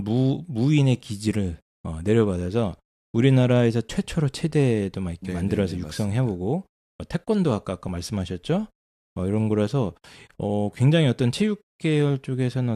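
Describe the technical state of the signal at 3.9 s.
At 3.90 s an overlap between stream segments cuts away about 12 milliseconds of real speech at a segment boundary, so the waveform jumps and a tiny skip is heard.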